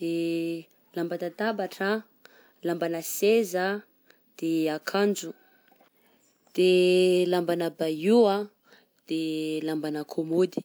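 No technical faults can be heard anywhere in the speech recording, and the signal stays continuous and stable throughout.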